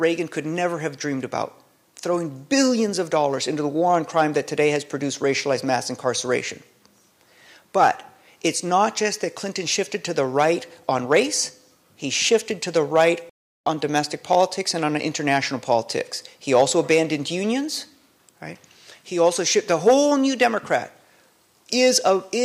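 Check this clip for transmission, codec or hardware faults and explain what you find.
One fault: a rebuffering stall from 13.30 to 13.66 s. The player exhausted its downloaded audio and paused until more data arrived, so the sound drops to silence for about 0.37 s, then resumes exactly where it stopped, with nothing lost but time added.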